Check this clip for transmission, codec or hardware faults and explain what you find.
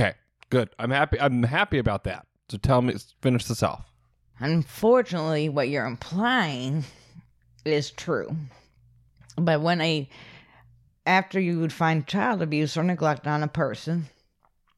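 Listening through the speech turns up no fault of the kind asked about. There is nothing here to describe or explain.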